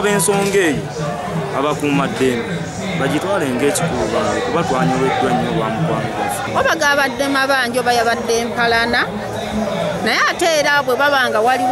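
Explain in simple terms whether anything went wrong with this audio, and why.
Nothing went wrong: no audible faults anywhere in the recording.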